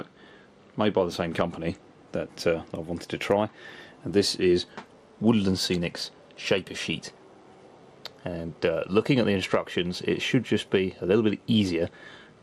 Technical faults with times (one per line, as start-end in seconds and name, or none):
0.00-12.43 MP2 compression